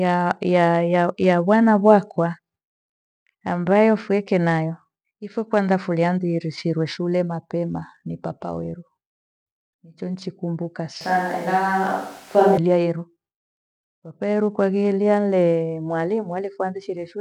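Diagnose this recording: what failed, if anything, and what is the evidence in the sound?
A switch to a distant microphone runs from 11.01 s to 12.57 s, just after "niche nichikumbuka". At the capture stage, the speech turns abruptly roomy and hollow with thinner bass, then snaps back at 12.57 s. The level barely changes, but the room noise rises to around 30 dB below the speech. The likely cause is that the close microphone's signal dropped out and a farther pickup, such as a camera microphone, filled the gap.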